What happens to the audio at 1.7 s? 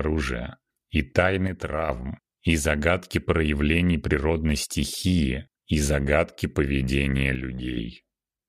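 At 1.7 s the sound is about 6 dB lower in level, having dropped abruptly; it stays down from 1.47 s to 1.89 s, then snaps back to full strength. This is most likely one channel dropping out: one side of the stereo signal vanishes for that stretch, so the mono sum keeps only half of what both channels shared, and anything carried solely by the missing side disappears entirely until it returns.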